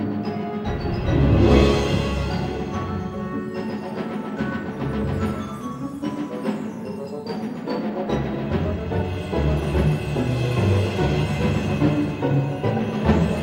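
No technical faults occur at any point in this audio.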